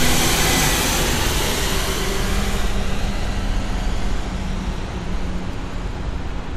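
From start to finish, the audio carries a hard ceiling: nothing is present above about 15.7 kHz, and the high end has the thin, swirly smear of heavy MP3 coding. That combination is the mark of low-bitrate audio saved at a high bitrate. A coarse first encode, most likely around 64 kbit/s, stripped the top band, and a later generous re-encode could not bring it back. On a spectrogram, energy stops at a flat horizontal edge near 15.7 kHz, with blotchy, speckled texture beneath it.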